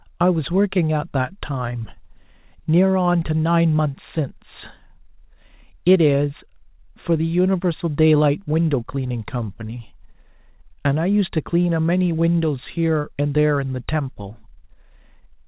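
Nothing stood out on listening to the speech, which comes through a telephone-style call path whose G.711 mu-law coding leaves nothing above 4 kHz.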